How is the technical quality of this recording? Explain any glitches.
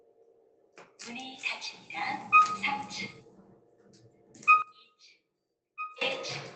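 The recording has clear processing faults. A speech-style noise suppressor works on the whole clip. It causes two deep dips, and there is also one abrupt level drop. The audio also passes through an Opus call path, which can be heard in the high end, which stops at around 8 kHz.

The noise suppressor applied to music or sounds is active throughout. It was built for speech and treats steady, non-vocal sound as noise. So the level keeps swinging by roughly 10 dB. Sustained parts and decays get pulled down, while sharp onsets slip through. The result is a pumping, unsteady texture. Tails seem to vanish early, and the sound thins out.

Sound is cut by the noise suppressor twice. This happens from 0.00 to 0.98 s, and again from 3.19 to 4.35 s. Each stretch lasts about a second. At its deepest, the drop reaches about 11 dB. In these spans the suppressor judged the sound to be noise and turned it down hard. 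Steady material sinks noticeably. Its fade is clipped short.

A sudden gain jump occurs at 4.62 s. The level falls by about 17 dB in one step and stays low until 6.01 s. There is no fade. The sound and its background drop together, at once. The likely cause is a digital gain change applied without a ramp, as when a setting switches instantly.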